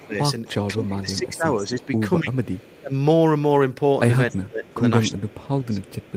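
From 0.0 to 1.86 s, an echo leak returns the speech about 271 ms late, about 20 dB down, likely from a far-end echo canceller leaving loudspeaker pickup. On a spectrogram it shows as faint repeated harmonic traces. From 0.02 to 2.94 s, speech suppressed in double talk dips by up to about 20 dB, in pieces totalling roughly one and a half seconds. This is likely the canceller ducking both talkers at once, and it shows as notches in the waveform envelope. Fainter echo leaks return at 2.59–2.8 s (about 30 dB down) and 4.66–4.71 s (about 35 dB down). Further double-talk suppression from 4.3 to 5.8 s drops the level by about 15 dB, likely for the same reason. A final echo leak from 5.32 s to the end sits about 25 dB down, again trailing by 271 ms.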